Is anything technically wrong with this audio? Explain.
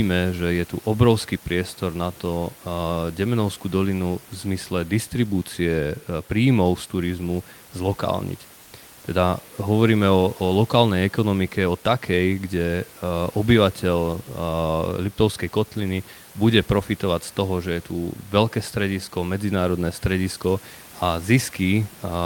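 Yes. From 8.63 to 8.71 s, just after "príjmov z turizmu zlokálniť", comfort noise stands in for the background for about 80 ms. The likely cause is discontinuous transmission of the kind Opus DTX performs: the sender stops sending audio during a pause, and the receiver fills the gap with synthetic noise. That patch replaces the room noise, which sits about 27 dB below the speech. For that moment the background becomes steady and featureless and about 1 dB quieter, before the real background returns.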